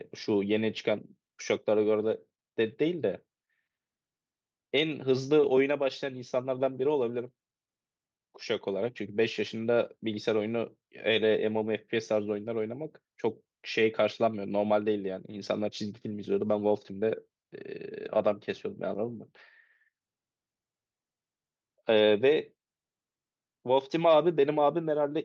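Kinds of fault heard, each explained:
No technical fault can be heard anywhere in this recording. The speech runs without any break, distortion, or change in level that would point to a problem in capture or playback.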